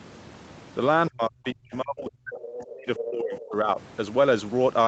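Speech suppressed in double talk from 1.1 to 2.88 s: the speech dips in and out, by about 35 dB at its deepest, likely because the echo canceller mistook overlapping talk for echo and turned everything down. Other side's voice leaking through at 2.39 to 2.73 s and 2.96 to 3.1 s: a second voice, roughly 15 dB and then 10 dB below the speech, is likely residual loudspeaker echo the canceller failed to remove. Speech suppressed in double talk returns from 3.05 to 3.78 s, with shallower dips of about 20 dB. Other side's voice leaking through recurs at 3.32 to 3.44 s, roughly 15 dB down. The call microphone processing limits the audio band to 8 kHz.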